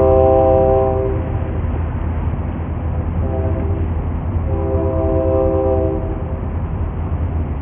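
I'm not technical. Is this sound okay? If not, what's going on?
No. Throughout the clip there is aliasing: the sound was squeezed into too low a quality setting without removing high tones first, so anything above about 3 kHz folds back as false, metallic, gritty tones. Simple muffling would only sound dull.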